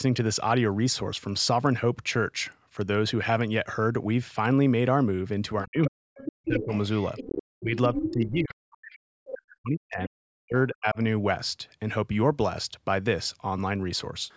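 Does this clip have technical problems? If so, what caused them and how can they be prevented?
Yes. Speech suppressed in double talk hits twice, from 5.64 to 6.7 s and from 7.61 to 10.98 s. The talker's speech dips hard there, by as much as about 40 dB. This likely happened because the echo canceller heard both sides at once. It could not tell the talker from the loudspeaker echo, so it turned everything down. A better double-talk detector, or a headset in place of a loudspeaker, would prevent it.

The other side's voice leaking through runs from 5.84 to 8.53 s. A second voice sits close to the talker's level, only about 5 dB below. It comes through the talker's microphone from their loudspeaker. The echo canceller likely failed to remove it while both sides spoke together. The frequent overlap during this stretch fits that cause. Using headphones, or lowering the loudspeaker volume, would stop the leak at its source.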